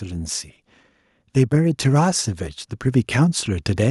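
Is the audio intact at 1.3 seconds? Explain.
No, automatic gain rising starts at 1.2 s and runs to the end. The input seemed too quiet, so the gain climbs gradually by about 7 dB, lifting voice and background together.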